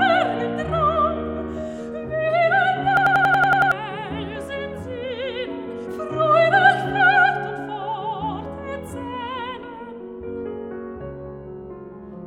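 At 2.97 s the system froze while the hardware kept replaying its ring buffer, a system hang loop: one 92.9 ms slice, fitting a 4096-sample buffer, repeats eight times at 10.8 Hz until 3.72 s, a machine-gun stutter replacing roughly 0.7 s.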